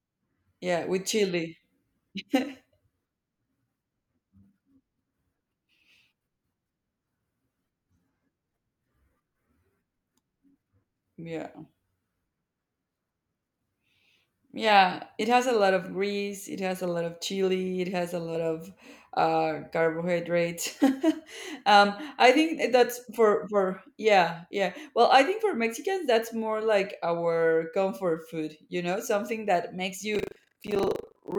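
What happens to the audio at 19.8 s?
Nothing goes wrong at 19.8 s; the speech runs through that moment without any audible dropout, click, glitch or other fault.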